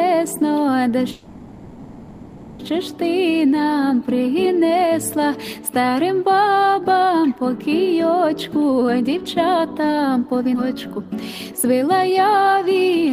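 A call audio freeze at 1.11 to 2.61 s fills about 1.5 s with the last sound stretched into a fading buzz or hiss, likely because delayed packets emptied the jitter buffer, after which playback resumes where it stopped. Jitter buffer speed-up runs from 8.30 to 10.49 s at 117% speed, trimming roughly 0.4 s, and again from 11.49 to 13.12 s at 110%, trimming about 0.15 s. Both times pitch-period slices are cut to shrink a backlog, so the audio hurries at unchanged pitch. A skip ahead at 10.55 to 10.58 s drops roughly 0.3 s, joining the two sides almost directly as playback jumps forward.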